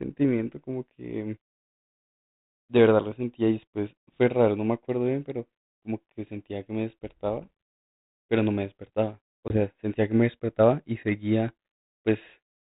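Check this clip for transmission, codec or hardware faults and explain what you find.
One fault stands out: packet loss on an ADPCM call, from 9.48 to 9.60 s, on what sounds like 32 kbit/s G.726. About 20 ms of speech, roughly one packet, drops to hard-edged silence. The decoder's predictor and step size lose step with the sender's. Speech then returns with brief distortion, settling within tens of milliseconds.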